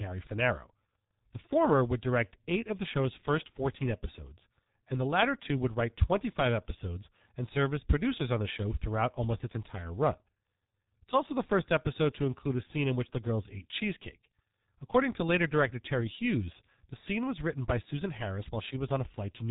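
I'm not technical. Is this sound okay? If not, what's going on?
No. The whole clip went through the G.723.1 codec, an old internet-phone codec that squeezes speech very hard. Nothing above about 3.8 kHz survives, so the speech sounds muffled and hoarse. Consonants blur together because the codec updates its model of the voice slowly.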